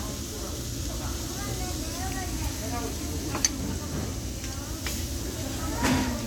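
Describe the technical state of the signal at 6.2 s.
At 6.2 s the signal is intact, with no dropout, distortion, glitch or other technical fault to be heard.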